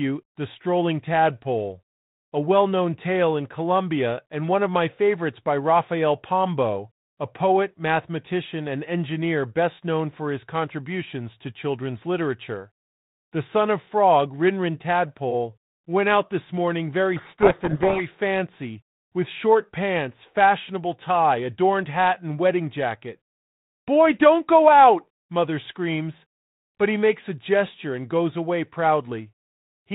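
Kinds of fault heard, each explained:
Codec payload misread: The sender and receiver disagree on the bit order of each G.726 code word. The decoder still gets valid-looking data, but it rebuilds the wrong sample differences. From 17.16 to 18.02 s, between "out this morning very" and "fancy with short pants", the speech is buried in harsh, grinding distortion. It clears when both ends agree again. Around it, the light G.726 coding fits 32 kbit/s, with nothing above 4 kHz.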